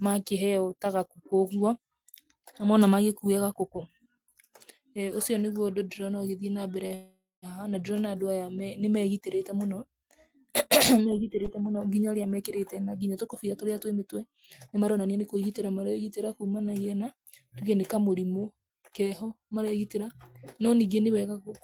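At 6.87 s there's a short stall from a late packet. A packet missed its slot, the jitter buffer ran dry, and the receiver stretched the last bit of speech for 32 ms until it showed up. Nothing is lost, but that sound hangs on a touch too long with a faint buzzy edge, and everything after it now runs 32 ms later.

Almost immediately, from 6.95 to 7.45 s, the speech freezes. This is a call audio freeze, likely from packets held up somewhere on the network. The receiver carries the last sound forward as a fading buzz that dies into about 200 ms of silence, filling 477 ms in all. Then the speech picks up exactly where it stopped, so there's a pause wedged in, nothing is dropped, and the delay has grown by another 477 ms.

From 12.37 to 15.36 s there's a jitter buffer speed-up. The buffer was holding more than its target, so the receiver trimmed out tiny pitch-period slices over and over, roughly a fifth of a second in total. 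Speech plays at 107% with the pitch unchanged and sounds a little hurried up to "maregitĩra kumanagia na tuge". It happens again from 19.10 to 20.09 s, a bit more noticeably at 111%, trimming about a tenth of a second.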